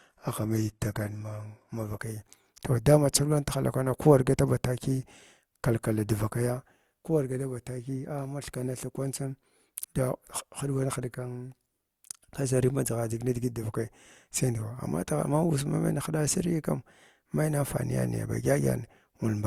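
For the first 2.0 s the speech sounds dull and swirly, with nothing above 12.3 kHz and a synthetic-sounding treble, before it turns suddenly clearer with no gap. This is an adaptive stream starting at a low bitrate. The player began on a low rung, which fits HE-AAC at 16 kbit/s, then stepped up to what sounds like AAC-LC at 96 kbit/s.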